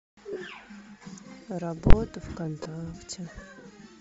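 Throughout, the speech carries a breathy, grainy edge in the upper range. This is likely Bluetooth LC3 compression at a low rate, around 32 kbps with 7.5 ms frames: the encoder discards much of the high spectrum and fills the gap with noise, so the damage is plainly audible.

From 0.33 to 0.37 s, lost LE Audio frames cause a short dropout of about 30 ms, which fits four 7.5 ms frames. The decoder recycles the previous spectrum with scrambled signs, so the sound briefly turns into a noisy smear instead of clean speech.

At 1.90 to 1.93 s, a calculation produced invalid numbers at full scale. Infinite or undefined values were clamped to the largest positive or negative value, pinning the output flat at one extreme value for about 23 ms, which fits a 1024-sample block. Because the block is so short, it is heard as one loud bang.

From 2.63 to 2.66 s, lost LE Audio frames return, concealing about 22.5 ms of audio, consistent with three frames. 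Repeated spectra with randomised signs again produce a brief grainy smear in place of the speech.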